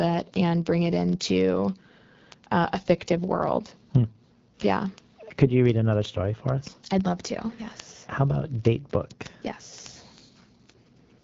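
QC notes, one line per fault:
throughout: AMR wideband (HD Voice) codec. The speech is rough and raspy, with plainly audible coding damage, consistent with one of the low AMR-WB rates around 8.85 kbit/s. Nothing comes through above about 7.5 kHz, and the top band is noise-filled rather than real detail.
0.10 to 11.21 s: word clock ticks. There's a steady train of sharp ticks of uneven strength, roughly every 40 ms, so around 300 of them. Each one is a single sample dropped or repeated as two unlocked clocks drift apart, which fits a clock mismatch of roughly 500 ppm.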